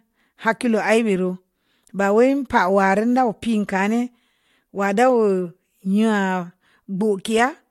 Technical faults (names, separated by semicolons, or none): none